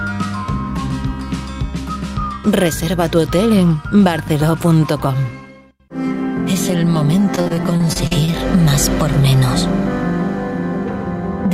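Between 7.35 and 8.34 s the audio turns choppy and robotic from repeated packet loss. A rapid run of short dropouts, the longest about 44 ms, gets patched by stretching the previous sound, so roughly a quarter of that second is filler, with bits simply missing.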